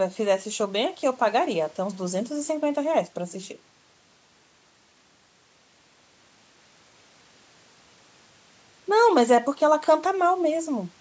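Nothing technically wrong turns up in this speech recording, which has simply been through a call's microphone processing, so the lowest bass is trimmed away and nothing sits above 8 kHz, both just as that path normally leaves things.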